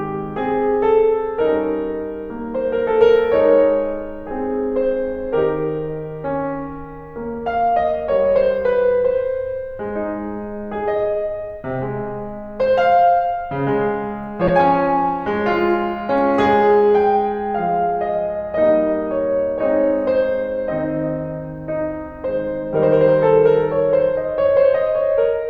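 Music with a corrupt frame decoded at 14.47 to 14.50 s: a loud, brief burst where damaged bits were decoded anyway, consistent with a single bad frame.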